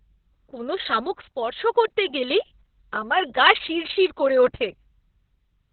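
Opus voice compression throughout: nothing above 4.2 kHz, and coarse SILK coding leaves the speech muffled, hoarse and slightly robotic, which fits narrowband operation near 6 kbps.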